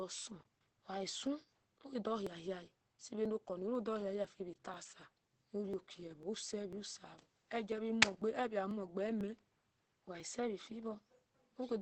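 From start to finish the speech carries Opus voice compression. Nothing is heard above about 8.5 kHz. The sound is muffled, a little hoarse, and faintly robotic. That fits the SILK coder in wideband mode at a low bitrate, around 12 kbps. SILK models the voice with linear prediction and 20 ms frames. At this rate it can only code the excitation coarsely. The damage is plainly audible.

From 0.27 s to 11.69 s there are periodic USB or driver dropouts. A brief tick or pop repeats every 0.50 s, about twenty times in all. Each time, roughly 4 ms of audio is skipped outright rather than filled with silence. The likely cause is a background task that stalls the bus or driver at a fixed interval. The ticks are heard only while the speech is sounding.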